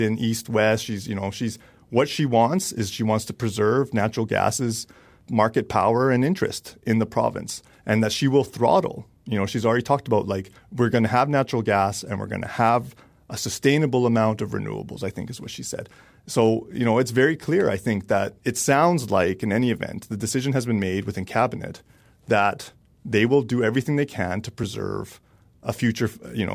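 No technical faults can be heard anywhere in the recording.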